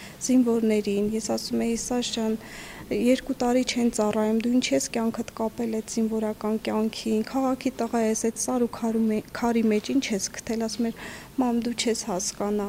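From 8.02 to 9.41 s, a call bitrate drop makes the audio rough and muffled, with high frequencies lost, consistent with the encoder falling from about 96 to 28 kbps.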